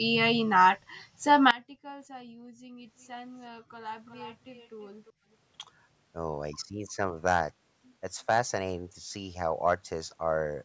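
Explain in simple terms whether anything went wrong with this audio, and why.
From about 1.51 s right to the end, the speech suddenly drops away and goes faint and distant. That's the sound of one channel inverted, most likely. One side of the stereo pair had its polarity flipped, so when the two sides get combined into mono, everything they share, which is most of the voice, cancels itself out. What's left is just the small difference between the channels, a faint ghost of the speech.

There are also two short stretches of echo leak, at 4.09 to 4.35 s and again at 4.54 to 4.86 s, where a faint delayed copy of the speech trails about 0.35 seconds behind. The second one is quieter still. Likely cause: someone on the call had their loudspeaker on, and their echo canceller didn't catch everything their microphone picked up, so scraps of the audio got sent back down the line.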